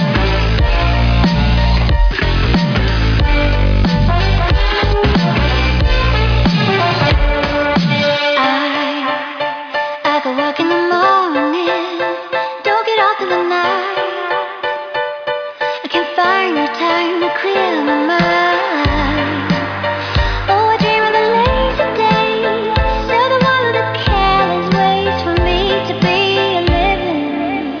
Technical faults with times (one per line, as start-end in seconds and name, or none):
none